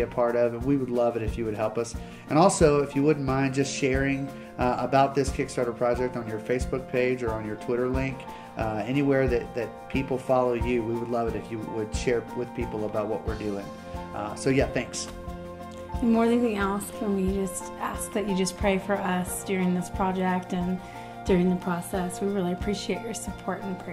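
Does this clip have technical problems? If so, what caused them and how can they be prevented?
No, there are no technical problems to report here.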